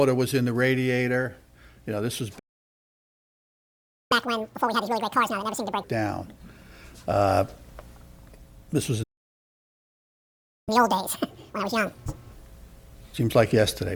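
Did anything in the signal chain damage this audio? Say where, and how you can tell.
Yes, at the playback stage. The sound cuts to silence twice in mid-flow, from 2.38 to 4.12 s and from 9.03 to 10.69 s, gaps of roughly 1.7 s and 1.6 s. Each time it resumes where it left off, not at a later point. This is a playback stall: the player stopped delivering samples for that stretch, likely because its buffer ran dry or its output thread was blocked, and the output went silent until it recovered.

Right after each gap, from 4.12 to 5.84 s and again from 10.69 to 12.33 s, the audio runs at double speed and sounds chipmunk-like, raised roughly ten semitones. It then drops back to normal pitch and tempo. This is catch-up at higher speed. The player resampled its backlog at 2x to recover part of the time lost during the stall, so speed and pitch rose together for that stretch.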